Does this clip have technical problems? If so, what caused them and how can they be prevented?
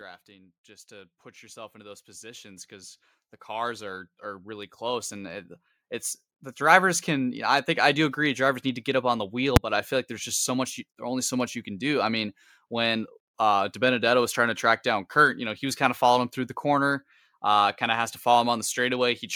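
Yes. From 0.26 s to 7.36 s the speech and the background noise swell together, climbing by about 20 dB over those seven seconds rather than jumping. This is automatic gain rising: the automatic gain control judged the input too quiet and kept raising its gain step by step, so the room tone lifts along with the voice. To prevent it, set a fixed input gain suited to the source and turn off automatic gain control before recording.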